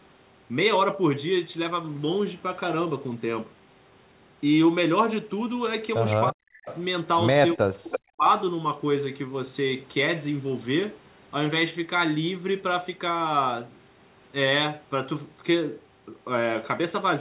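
At 6.3 s the speech suddenly sinks for about 0.3 s, down by something like 40 dB, until 6.59 s. That's speech suppressed in double talk, likely caused by the far end talking at the same moment: the echo canceller couldn't tell this talker apart from its own loudspeaker echo, so it clamped down on everything. The same thing happens again from 7.54 to 8.29 s, this time with around half a second of the speech dipping or dropping out in pieces.

Right after the first dip, from 6.65 to 6.82 s, there's a faint delayed copy of the voice trailing 316 ms behind, roughly 15 dB under the speech. That's an echo leak, likely because the far end is on a loudspeaker and its canceller let some of the played-back call slip through to its microphone and back to us. It returns from 7.92 to 7.99 s in the middle of the second suppression, a short scrap that's much louder, only about 5 dB below the speech and right at the 316 ms delay. 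All of this sits inside a narrowband call sound with nothing above 4 kHz, which fits a G.711 codec.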